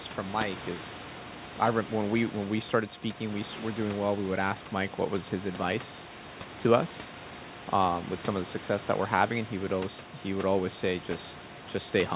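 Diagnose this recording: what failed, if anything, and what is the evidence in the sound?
Nothing failed in this recording.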